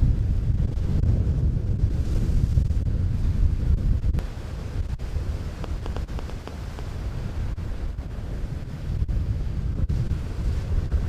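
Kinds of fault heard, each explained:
Train of clicks: From 5.64 to 6.80 s, around seven similar sharp clicks tick over the sound at an uneven pace, about five per second. They stand well above the surrounding level. Interference or a faulty connection is the likely cause.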